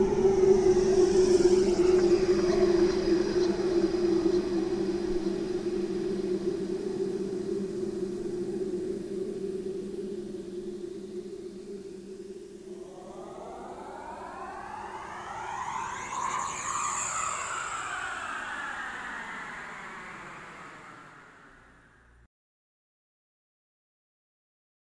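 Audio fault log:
No faults heard anywhere in this clip.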